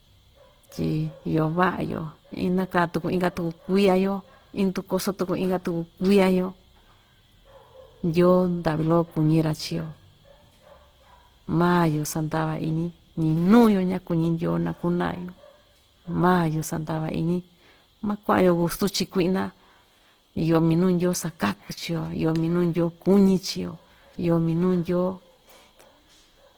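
A speech clip with plainly audible Opus compression damage throughout. The sound is grainy and rough, with a noisy texture in place of clean tone. Content still reaches about 20.2 kHz. The likely cause is Opus in its music mode filling starved bands with noise, which fits a bitrate near 16 kbps.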